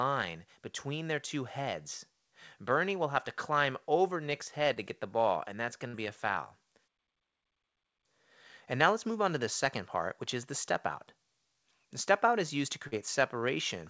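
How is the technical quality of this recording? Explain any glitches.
The recording carries three glitches from a call link, all caused by lost packets. Nothing is heard above 8 kHz, which fits a G.722 call codec at 64 kbps.

Short concealed packet loss occurs twice, from 4.74 to 4.78 s and from 12.87 to 12.93 s. In each case a small piece of the stream arrived too late to be decoded: about 20 ms the first time, about 40 ms the second. The receiver covered each gap by carrying the last sound forward, then blended back into the real audio. The result is a brief smear or wobble.

A burst of packet loss runs from 5.88 to 5.95 s. About 60 ms of consecutive audio went missing. The receiver extended the last sound across the gap and faded it as the gap went on. This is heard as a short held buzz or hiss. The sound then resumes slightly further on, with the missing stretch simply absent.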